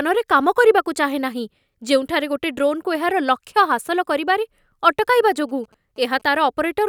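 From 5.02 to 6.69 s, GSM signalling bursts from what sounds like a nearby 2G phone leak into the speech. The audio circuit rectifies the radio pulses, giving a faint galloping dit-dit-dit of short 216.7 Hz buzzes, roughly 30 dB below the speech.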